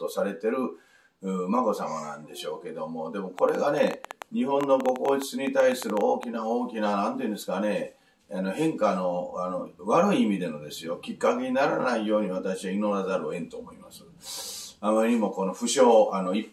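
From 3.39 to 6.24 s there's a train of clicks, around thirty of them at roughly 9.5 per second, but unevenly spaced, so it comes across as a stuttering tick-pop laid over the sound rather than a steady buzz. Each click has much the same sharp shape and pokes out about ten dB above the material, audible through the gaps too. It's likely interference from nearby gear or a faulty connection or power supply.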